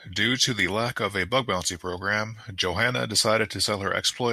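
Nothing goes wrong anywhere in this speech clip, so there are no technical faults to walk through here.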